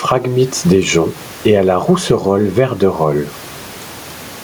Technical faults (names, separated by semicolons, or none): gain pumping